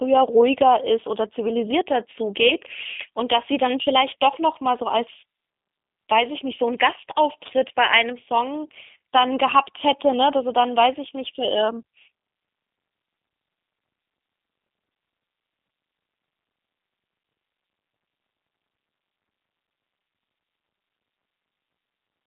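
From start to finish the speech carries G.729 codec damage, which fits G.729A at 8 kbit/s. It sits in a 150 Hz to 3.6 kHz band, with nothing above 3.7 kHz. Speech is rebuilt from a filter, pitch predictor and pulses, so it sounds plainly rough and synthetic.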